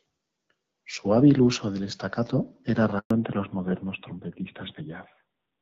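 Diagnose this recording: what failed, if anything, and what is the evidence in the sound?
Network stage: a handover gap runs from 2.99 to 3.11 s, a 120 ms hole where the speech fades within tens of milliseconds and goes silent while the call switches networks and no frames arrive. On a waveform it is a flat stretch; on a spectrogram, a blank vertical band.

Codec stage: from 3.11 s to the end the call falls back to narrowband. Wideband AMR-WB at a rate that fits 12.65 kbit/s is replaced by narrowband AMR-NB, likely at 7.4 kbit/s. Everything above 4 kHz disappears, leaving duller, rougher speech, and the spectrogram shows a hard ceiling at 4 kHz. Before the switch, content reaches about 7 kHz with light coding damage.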